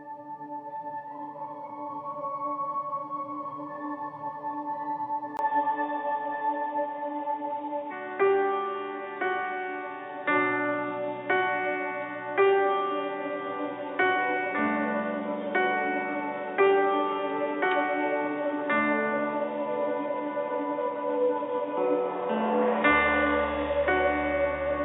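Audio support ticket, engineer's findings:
Input likely switched to a poorer device at 5.37 s, after a 20 ms gap. Narrower capture band: nothing above 3.8 kHz to clip end, sound dull and boxy. Modest level shift, new faint noise floor well below signal.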